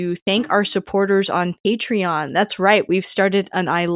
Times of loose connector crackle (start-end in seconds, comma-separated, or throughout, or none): none